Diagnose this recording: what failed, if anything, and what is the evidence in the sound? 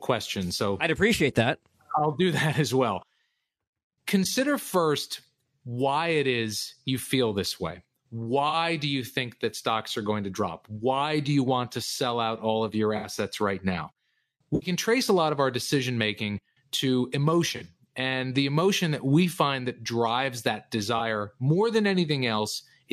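Codec stage: corrupt frames concealed in this speech. Concealed frames fall at 8.47–8.55 s, 12.97–13.07 s (after "out all of your"), 14.55–14.70 s, 17.56–17.62 s and 20.98–21.00 s. The decoder caught damaged AAC frames. It muted them or filled them from earlier spectrum.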